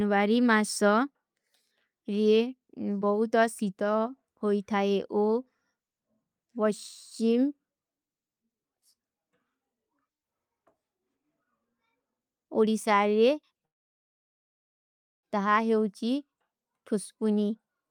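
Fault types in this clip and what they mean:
long network dropout: from 13.65 to 15.25 s the speech stops abruptly, a brief fading tail gives way to about 1.6 s of near-silence, and the speech resumes with that stretch missing, likely because incoming packets were lost. The waveform shows a flat gap, and the spectrogram shows a dark vertical band.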